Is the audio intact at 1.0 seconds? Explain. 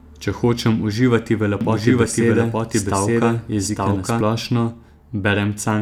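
Yes, the speech at 1.0 seconds plays through intact, with no dropout, click, distortion or other fault at that moment.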